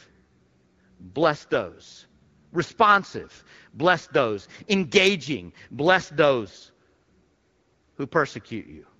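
No faults are present in this speech clip; the AMR-WB path at 12.65 kbit/s leaves only light coding traces, with band-limited, clear speech as expected for HD Voice at that rate.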